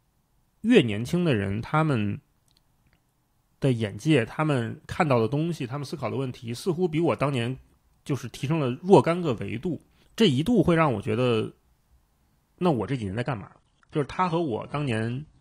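At 12.84 s the speech switches abruptly to an adaptive stream at a lower bitrate. It stays degraded until the end at 15.40 s. There is no gap. Nothing remains above 10.2 kHz, and codec artefacts thicken. This fits a step from roughly 96 down to 32 kbit/s AAC.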